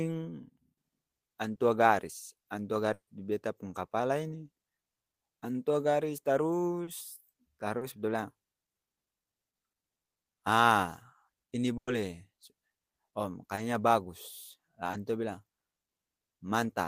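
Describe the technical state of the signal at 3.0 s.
At 3.0 s there is a burst of packet loss from 2.93 to 3.09 s, between "garis antua" and "beta pung kapala ini". About 140 ms of the audio is missing. The receiver stretches the last sound into a fading buzz or hiss that drops to silence. On a spectrogram, smeared, repeated harmonics decay into a blank band. The waveform shows a shrinking envelope, then flat silence before speech resumes abruptly.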